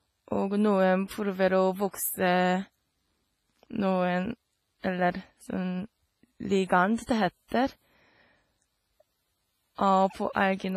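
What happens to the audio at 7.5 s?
Right around 7.48 to 7.52 s there's a pre-echo: a hiss creeps in for about 35 ms just before a sharp attack in the speech, and the onset itself comes out blurred rather than crisp. The codec spreads its quantisation noise across the whole transform block, so noise sized for the loud attack also fills the quiet stretch leading into it, which you hear as that brief smear ahead of the hit.

Underneath that, the whole clip has a ringing, washy quality, with a hiss that swells and fades along with the speech and nothing at all above 15 kHz. That's heavy damage, most likely from WMA compression, specifically the old WMA 1 encoder at a low bitrate, something like 24 kbps. With long blocks its noise smears over tens of milliseconds and weaker detail gets dropped, which is exactly the setup that produces the pre-echo at 7.5 s.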